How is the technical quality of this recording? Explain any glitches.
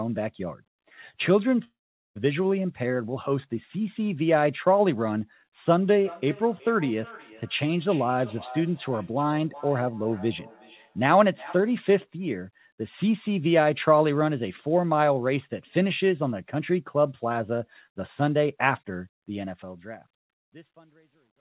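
The recording has three clear faults: a gap early on, an echo through the middle, and a grainy breakup in the closing fade. Throughout, the sound is band-limited with nothing above 4 kHz, which fits a 64 kbps G.711 mu-law call path.

From 1.64 to 2.17 s, the audio smears into a fading buzz and then goes silent for about 0.44 s before resuming with roughly half a second missing. This is likely a long network dropout, with the receiver concealing the gap. On a spectrogram, a blurred, decaying smear gives way to an empty band.

Between 5.90 and 11.76 s, each phrase returns about 0.4 s later, thinner and ringing, at most about 19 dB below the direct sound. This is feedback echo between two devices: one device's microphone re-captures what another device plays. The waveform shows faint, regularly spaced copies trailing each burst.

From 19.22 s to the end at 21.40 s, truncation distortion on a fade turns the fade-out's tail gritty, worst from 20.18 s. 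Dropping to levels that fit an 11-bit stage without dither, the zoomed waveform becomes staircase steps.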